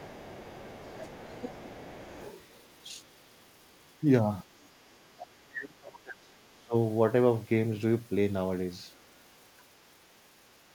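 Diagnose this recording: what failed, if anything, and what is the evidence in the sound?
In the call processing, the echo canceller likely left residual loudspeaker pickup in the microphone signal. The other side's voice leaking through is audible from 0.0 to 2.81 s, roughly 25 dB below the talker, then faintly at 4.62 s and again from 5.18 to 5.27 s.

The same canceller likely misjudged double talk and attenuated the talker along with the echo, producing speech suppressed in double talk. The talker dips about 5 dB at 0.75 s, about 10 dB from 1.04 to 1.17 s, and nearly drops out, around 35 dB down, from 5.49 to 6.74 s.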